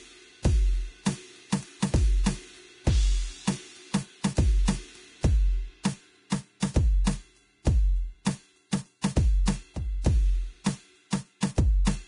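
Throughout, the music has nothing above 10.6 kHz, and its treble sounds grainy and hissy with roughened tones. This is likely heavy Vorbis compression at a low bitrate, around 31 kbps.

Pre-echo appears at 6.30 s, 6.60 to 6.62 s, 11.11 s and 11.41 s. Quantisation noise spreads 19 to 22 ms ahead of each sharp attack, so a brief hiss precedes each softened hit.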